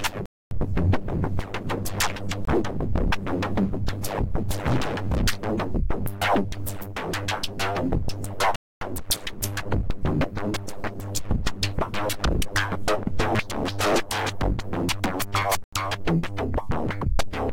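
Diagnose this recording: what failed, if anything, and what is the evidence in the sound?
A buffer underrun let blocks of digital silence reach the output: holes at 0.26–0.51 s, 8.56–8.81 s, and 15.64–15.73 s, the last fitting a 4096-sample buffer.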